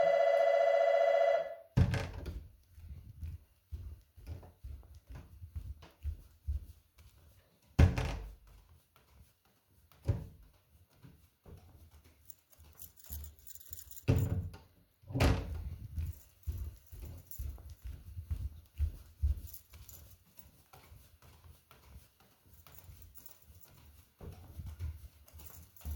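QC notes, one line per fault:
Nothing stood out on listening to these sounds.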